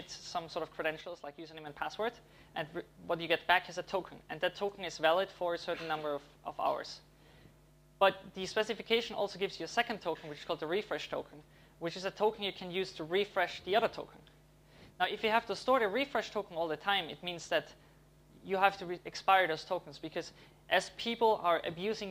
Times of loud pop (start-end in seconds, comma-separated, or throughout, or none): none